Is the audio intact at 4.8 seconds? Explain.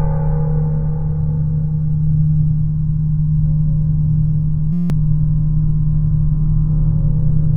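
No. From 4.73 to 4.90 s there is a system hang loop: the system stalled while the sound hardware kept replaying the same 5.8 ms slice of its ring buffer, which fits a 256-sample buffer, about 30 times over. It comes across as a steady buzz at 172 Hz, and about a fifth of a second of real audio is missing. On a waveform the span shows one identical short cycle tiled end to end. A spectrogram shows evenly spaced horizontal lines at multiples of 172 Hz.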